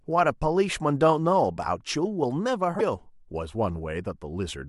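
Speech clip with a brief disruption from 2.78 to 2.81 s, where the audio skips forward and the moment comes out garbled. The likely cause is a broken MP3 bit reservoir: frames were lost, and the next frame decoded its borrowed bits from the wrong data. The span fits one frame of about 26 ms.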